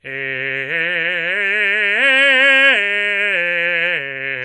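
From the very start and all the way through, this music carries plainly audible MP3 compression, likely from a low-bitrate encode, and the damage fits something around 48 kbps. Nothing gets through above 11.4 kHz, so the top end just stops and the whole thing sounds dull. With so few bits, quieter frequency detail keeps dropping in and out between frames, which gives that watery, swirly texture, and attacks come out smeared instead of crisp.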